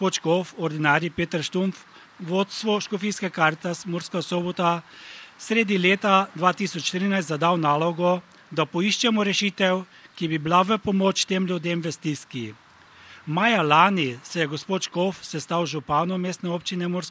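No technical fault can be heard anywhere in this audio. It has passed through a call's microphone processing, which trims away the lowest bass and leaves nothing above 8 kHz, as expected for that path.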